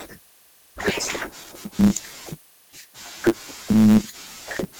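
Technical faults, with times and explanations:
Throughout: block size mismatch (truncated). A buzz at about 109 Hz runs under the speech, marking each block boundary. The end of every block is dropped, so the speech plays about 1.09 times fast. Its timbre stays, since samples are discarded rather than resampled.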